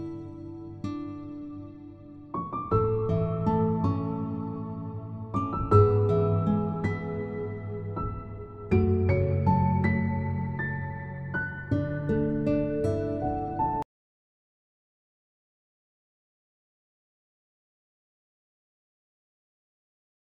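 Nothing in the audio stands out as a technical problem, so there's nothing to flag along the way.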